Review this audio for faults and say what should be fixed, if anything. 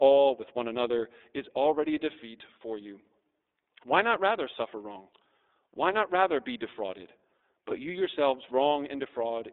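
The iLBC codec runs throughout, with plainly audible coding damage. The spectrogram shows nothing below 300 Hz or above 3.7 kHz, and the 30 ms framing fits iLBC's 13.33 kbps mode. Prevent it by carrying the call on a wideband codec.

Lost iLBC frames occur at 7.38 to 7.41 s, just after "not rather be defrauded." The decoder filled the 30 ms gap, which fits one lost frame, by repeating the last pitch cycle mixed with noise. On the spectrogram this appears as a short, static, repeated harmonic block, and normal sound resumes at once. Prevent it with forward error correction or a jitter buffer on the network path.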